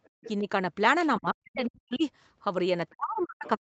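A faint second voice sits under this speech from 0.04 to 0.29 s, roughly 20 dB below the main talker. It returns as a very brief, quieter scrap from 3.19 to 3.24 s, about 35 dB down. This is the other side's voice leaking through. The far end was playing on the talker's loudspeaker, and the echo canceller likely left part of it in the microphone signal. The talker's own voice also drops out in places, which is speech suppressed in double talk. There is a slight dip of around 5 dB from 0.39 to 0.47 s. From 1.19 to 2.04 s the voice is pushed down by something like 40 dB for most of that span. From 2.92 s to the end of the clip it falls by a similar depth. Each time, both sides were probably talking at once, and the canceller likely could not tell the near voice from the loudspeaker echo, so it attenuated everything. The call's microphone processing also trims the deepest bass and leaves nothing above 8 kHz.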